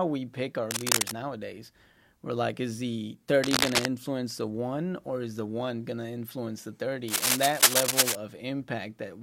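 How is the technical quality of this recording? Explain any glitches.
The recording has a recurring problem: three bursts of cable scratch noise over the speech. They run from 0.71 to 1.14 s, right after "we pick our"; from 3.42 to 3.86 s, after "we're like is the" and before "the one or is"; and from 7.08 to 8.16 s, after "going to influence the". Each is dense, ragged crackle sitting a bit louder than the voice. It's likely a worn cable or connector being moved, with its contact resistance jumping around and spraying noise into the signal.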